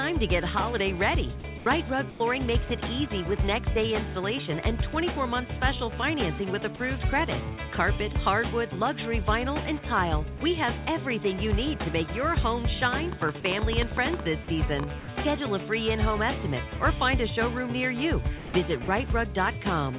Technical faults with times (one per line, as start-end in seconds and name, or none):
1.40-1.66 sound chopped by the voice detector
2.10-2.20 sound dropped by the voice detector
6.76-6.80 sound dropped by the voice detector
10.38 sound dropped by the voice detector
12.94-14.84 train of clicks
13.40-13.44 sound dropped by the voice detector
15.00-15.08 sound dropped by the voice detector
18.38-18.54 sound dropped by the voice detector
18.84-18.88 sound dropped by the voice detector